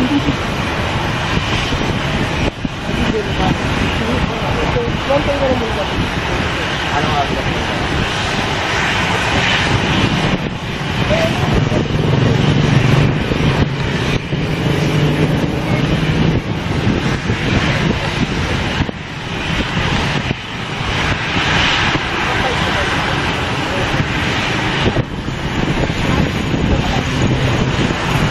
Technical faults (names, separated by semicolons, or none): none